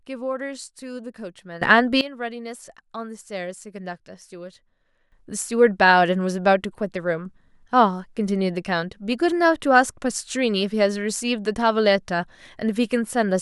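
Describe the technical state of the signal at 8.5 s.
At 8.5 s the signal sits inside a sudden gain jump that began at 5.12 s and runs to the end: speech and background noise both stay about 12 dB louder, likely from gain applied without a ramp.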